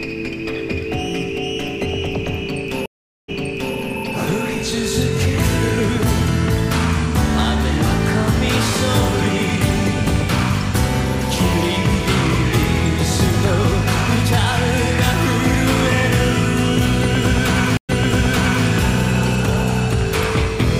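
Two stream reconnects: at 2.86 s the audio drops out for 0.42 s and resumes 0.46 s earlier, and at 17.77 s a 0.12 s gap jumps back 0.77 s, as a fresh decoder picks up the server's resent audio.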